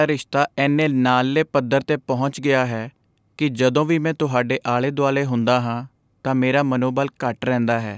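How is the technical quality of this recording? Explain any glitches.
No glitches or technical faults turn up anywhere in the recording. The speech has passed through a call's microphone processing, so the lowest bass is trimmed away and nothing sits above 8 kHz, which is normal for that path.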